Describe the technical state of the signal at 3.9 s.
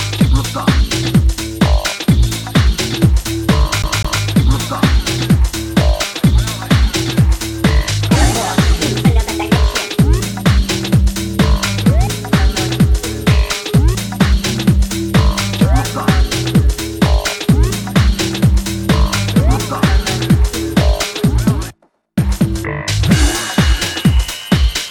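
At 3.9 s the playback is caught in a CD stuck on one turn, from 3.82 to 4.23 s: a scratch knocks the laser back one track each revolution, so a 0.2 s slice of audio plays twice, each jump marked by a brief mute, giving a quick, even stutter.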